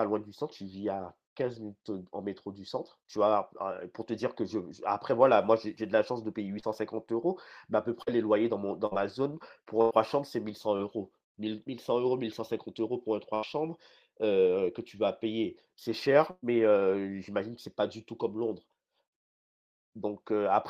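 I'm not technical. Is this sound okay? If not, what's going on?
No. The speech has gaps where pieces of the call were lost in transit and the receiving end papered over them.

Short concealed packet loss occurs at 6.59–6.65 s, 8.03–8.09 s and 10.76–10.81 s. Each time, a few hundredths of a second of audio (about 20 to 40 ms) never arrived in time. The receiver filled the hole by stretching out the sound just before it, then blended back in. You hear this as a brief smear or wobble, and a quick consonant may drop out.

A burst of packet loss occurs at 8.87–8.93 s, 9.81–9.93 s, 13.35–13.45 s and 16.31–16.44 s. These lose roughly 40, 100, 80 and 120 ms of speech. The receiver kept the last sound going and faded it, which gives a held buzz or a fading hiss. The speech then resumes further along, with the lost part skipped. The one at 16.31 s runs out of filler and drops to silence for about 20 ms before the sound returns.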